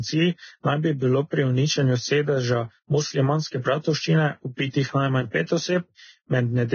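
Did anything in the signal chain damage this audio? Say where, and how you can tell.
Yes, heavy Vorbis compression across the whole speech clip, most likely from the codec stage. Nothing is present above 6.5 kHz, and the remaining treble sounds hissy and grainy, with blurred consonant attacks. That points to the encoder running at a very low quality setting, consistent with a bitrate near 18 kbps. At that rate it lowers its cut-off and quantises the upper residue so coarsely that fine detail turns into noise of similar energy.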